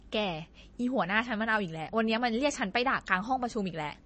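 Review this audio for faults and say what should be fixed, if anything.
Throughout the speech, codec damage is plainly audible, and nothing remains above 8.3 kHz. The likely cause is MP3 compression at a low bitrate, near 32 kbps. Starved of bits, the encoder drops weak frequency lines frame by frame and cuts the treble. Encode at a higher bitrate, or keep an uncompressed master.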